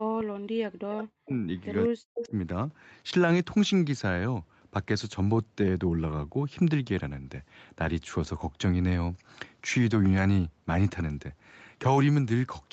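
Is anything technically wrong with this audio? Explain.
Yes. From 0.0 to 1.32 s and again from 1.89 to 2.33 s there is speech suppressed in double talk, likely because an echo canceller could not tell the local talker from loudspeaker echo while both sides spoke and so attenuated everything. The sound dips by up to about 40 dB, for roughly a second in the first stretch, and drops out in pieces.

Between 2.17 and 2.27 s there is an echo leak, likely from a far-end echo canceller letting part of its loudspeaker pickup through and sending it back. A brief copy of the sound returns about 203 ms late, roughly 10 dB below the main signal.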